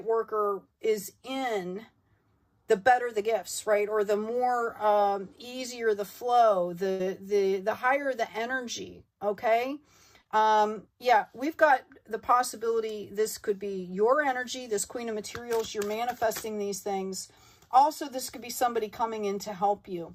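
At 6.91 s there's a burst of packet loss: about 80 ms never arrived, so the receiver stretches the last sound, fading it, then jumps ahead to 7.01 s. Around 10.21 s a short concealed packet loss drops about 40 ms, patched by continuing the previous sound before blending back by 10.27 s, heard as a quick smear.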